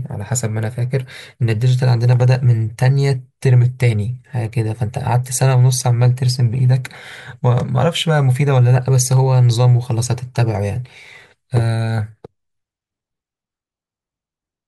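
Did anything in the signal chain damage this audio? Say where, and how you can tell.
No, nothing in the chain damaged it.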